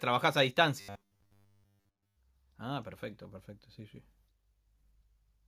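From 0.81 to 2.17 s the speech turns into robotic sound from repeated short buffers, a rigid metallic buzz near 100 Hz. It likely comes from a 10 ms stretch being replayed while most of the real audio is skipped. On a spectrogram, evenly spaced harmonics lock at 100 Hz intervals; the waveform shows identical repeating cycles.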